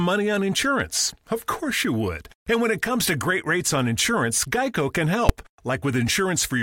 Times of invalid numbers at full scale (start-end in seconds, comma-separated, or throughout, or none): 5.29